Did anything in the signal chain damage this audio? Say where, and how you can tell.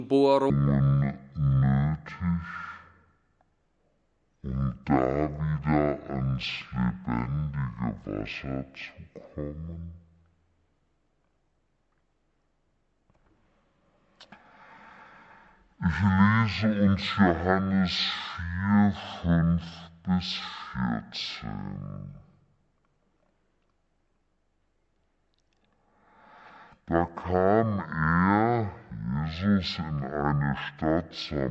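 Yes. A wrong sample rate at playback from 0.5 s runs the audio at half speed and an octave low, which fits 44.1 kHz audio played near 22 kHz. On a spectrogram, everything is shifted downward, and the waveform is stretched.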